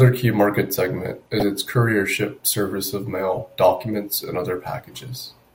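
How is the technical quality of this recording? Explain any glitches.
There's one glitch in the speech, DAB burbling from about 1.37 to 1.42 s, right after "key market segment" and before "its couriership service of". Weak reception let bit errors slip past error correction into the MP2 data, corrupting sub-band samples across what sounds like a few frames. You hear a brief burst of burbling noise.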